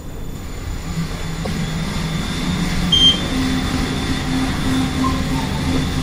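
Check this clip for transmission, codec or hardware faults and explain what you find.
One fault is present: a short burst of damaged data in the compressed stream, from 1.43 to 1.47 s. For about 40 ms the decoder receives frames it cannot read correctly, loses sync, and skips ahead to the next frame header it can recognise. The result is a brief disturbance in the sound. A dropout would leave silence or a repeated fragment instead. A clipping click would not jump ahead in time.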